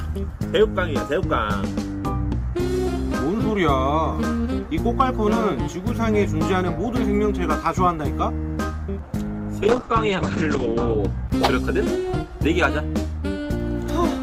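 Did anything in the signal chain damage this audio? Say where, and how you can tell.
Yes. A call bitrate drop at the codec, from 9.67 to 11.05 s: a falling bandwidth estimate forced the encoder from 64 to 9 kbps for 1.3 s. Coarser coding turns the sound rough and watery, and its bandwidth narrows from 20 kHz to 8 kHz, muffling it.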